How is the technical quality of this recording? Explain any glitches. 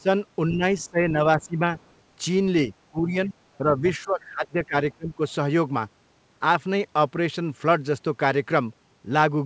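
The recording has two kinds of glitch, both tied to echo cancellation on a call, with the audio band ending at 8 kHz, as expected from a wideband G.722 call path at 64 kbps.

Speech suppressed in double talk: at 0.0–0.09, 0.5–1.74, 2.9–3.32, 3.58–3.84 and 4.04–5.21 s, the talker's speech sinks, by up to roughly 20 dB at its deepest. The likely cause is the echo canceller mistaking overlapping far-end talk for echo and turning everything down.

Other side's voice leaking through: from 1.81 to 1.92 s, a faint second voice surfaces, around 40 dB below the speech. This is likely loudspeaker playback that the echo canceller failed to fully remove from the microphone signal.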